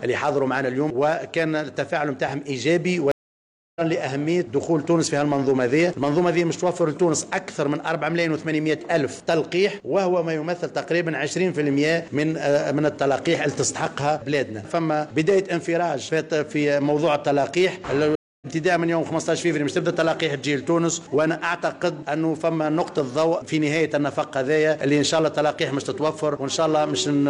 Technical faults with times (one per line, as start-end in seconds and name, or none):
3.11-3.82 stream reconnect
18.15-18.47 stream reconnect